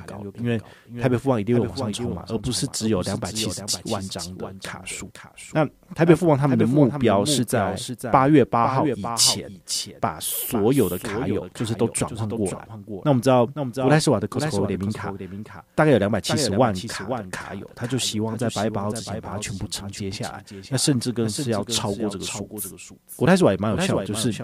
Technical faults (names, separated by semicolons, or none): doubled audio track